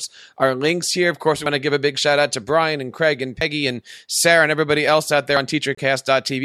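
At 1.46 s the speech jumps forward: roughly 50 ms is gone and the two sides butt together with no gap. The same skip recurs at 3.41 s and 5.37 s, spaced about 2 s apart, so this is audio missing between chunks, likely from a recorder handing over between 2-second blocks. Because time is removed rather than replaced, the cue is the missing fragment and the regular spacing.

At 2.33 s a brief glitch appears, and again from 5.75 to 5.79 s. These are corrupt frames decoded: damaged compressed data was played anyway, putting energy at the wrong frequencies. The first burst suggests a couple of frames were affected, the second about one. Unlike the skips, these events occur at irregular times.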